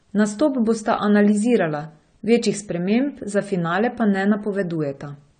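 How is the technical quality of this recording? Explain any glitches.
The recording is compromised by plainly audible compression damage from start to finish. Throughout, nothing is present above 9 kHz, and the speech sounds dull and smeared with a warbling texture. That points to AAC compression, likely AAC-LC at a low bitrate around 32 kbps, where coarse spectral quantisation empties bands. A plain low-pass filter would only dull the sound, not cause this warble.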